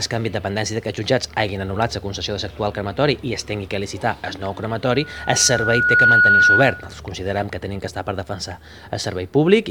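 Loudspeaker feedback squeal runs from 4.88 to 6.97 s: the microphone is picking up its own loudspeaker, and at 1.5 kHz the loop gain passes one, so a pure tone swells over roughly a second into a squeal sitting about 10 dB above the sound.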